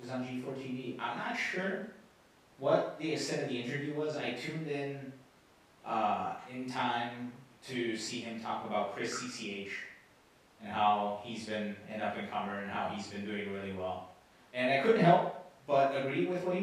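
No technical faults are audible.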